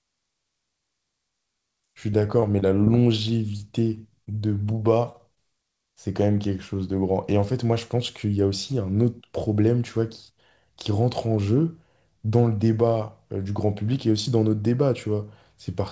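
From 2.40 to 5.38 s, scattered short gaps: about ten brief packet losses, each patched by extending the preceding sound, leave small ticks and smears in the speech, which has nothing above 8 kHz.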